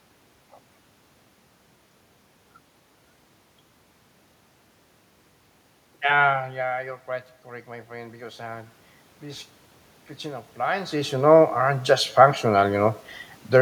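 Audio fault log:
7.46–9.53 s and 10.07–13.03 s, automatic gain rising: The level reaching the microphone drops by about 13 dB each time, which fits the talker moving back from it. The gain control treats this as too quiet an input. It raises its gain slowly, by about 4 dB over the first stretch and about 6 dB over the second. Voice and room noise swell together, so the background climbs with the speech.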